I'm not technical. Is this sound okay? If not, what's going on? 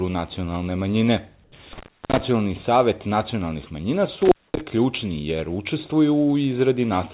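No, there are two kinds of fault in this speech recording.

From 1.44 to 1.52 s, the real room sound in a pause is briefly replaced by a flat, featureless hiss that is a little quieter than the surroundings. This is comfort noise in place of the background. The likely cause is the calling system switching off transmission during a silent moment. The receiving end then fills the 80 ms gap with artificial noise that only roughly imitates the real background.

There are also two dropouts from intermittent contact, where a loose cable or plug seems to lose connection for a moment. The first runs from 1.73 to 2.20 s, with about 340 ms of dropout, just before "savet nacionalnih manjina". The second runs from 4.22 to 4.61 s, with about 230 ms of dropout, between "savet nacionalnih manjina" and "ključni jer". Each time, the sound cuts out with a crackle where it breaks and resumes, leaving only faint hiss while the connection is open. 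The recording passed through a phone-style call connection, which is why nothing above 4 kHz is present.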